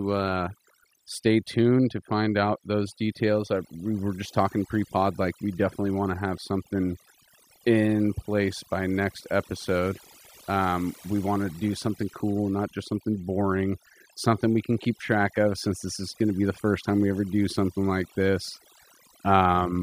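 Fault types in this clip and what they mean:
Overdone noise removal: noise reduction set far too aggressively across the whole speech clip, gating individual frequency bands whenever they dip near the estimated noise floor, taking soft speech detail with them. The background drops away and breaks up into twinkling specks. A spectrogram shows scattered isolated dots between words, and ragged, holed harmonics.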